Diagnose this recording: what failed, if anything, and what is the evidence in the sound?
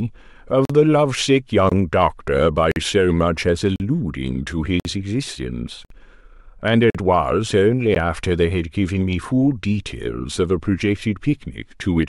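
The stream's segment timestamps failed to meet at the joins of roughly 1-second segments, so the player bridged each gap between stream segments with silence. This is a streaming-playback fault. The speech breaks off abruptly into hard-edged holes at 0.65, 1.69, 2.71, 3.76, 4.80, 5.85, 6.90 and 7.95 s, recurring about every 1.05 s. Each hole lasts between 15 and 54 ms. No audio is lost; silence is inserted between the segments.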